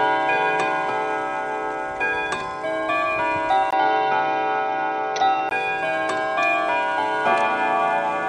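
From 3.71 s to 5.51 s the input likely switched to a poorer device. After a 20 ms gap the band stops near 6.1 kHz, and the sound turns dull and boxy over a new noise floor about 35 dB down at roughly unchanged level.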